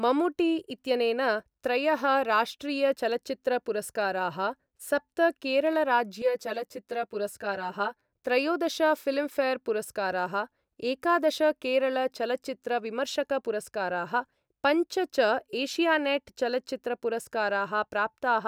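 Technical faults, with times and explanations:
6.22 to 8.13 s, channel delay (comb filtering): the speech turns hollow and phasey for about two seconds. One channel arrives roughly 10 ms behind the other. When the two are summed to mono, the shared sound cancels at evenly spaced frequencies. The first notch sits near 50 Hz. Further notches follow about every 100 Hz above it. These fixed gaps in the spectrum thin the sound and give it a hollow, tube-like colour.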